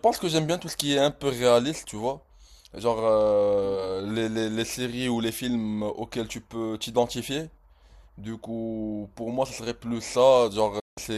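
At 10.79 s a digital broadcast dropout muted reception until valid frames returned; the speech fades within 8 ms and stays silent until 10.98 s.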